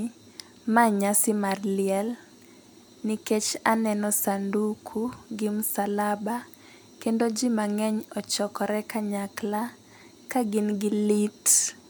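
No technical faults are audible.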